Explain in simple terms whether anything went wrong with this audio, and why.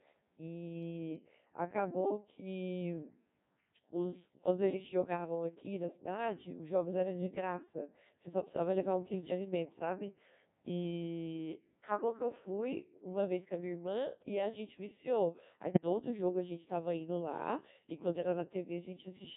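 Yes, a couple of things. The whole clip runs through the Codec 2 vocoder, a very low-rate digital-radio codec that rebuilds the voice from pitch and tone settings instead of keeping the real waveform. That's why the speech sounds robotic and buzzy from start to finish, and the damage here is heavy.

Then, from about 15.74 to 15.84 s, there's a short burst of bit errors on digital voice radio. A small share of bits, a few percent, got flipped, and since each bit steers pitch, level or tone, the voice briefly jumps and warbles into garbled noise.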